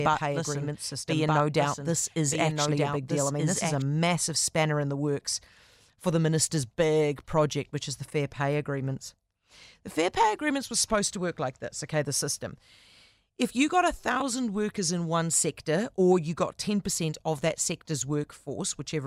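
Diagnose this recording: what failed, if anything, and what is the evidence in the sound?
A doubled audio track runs from the start until it cuts off abruptly at 3.82 s: a full-band copy trails about one and a half seconds behind, about 5 dB quieter. Unlike echo, it has no decay or room colour, likely from a slower second capture path.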